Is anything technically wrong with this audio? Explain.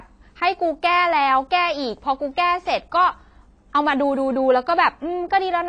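Yes. Throughout the speech, nothing sits above 10.2 kHz and sibilants sound fizzy and warbly. This is likely AAC compression at a low bitrate (fits about 32 kbps), which drops the top band and coarsely quantises the rest. Unlike a plain low-pass filter, the texture shifts from frame to frame.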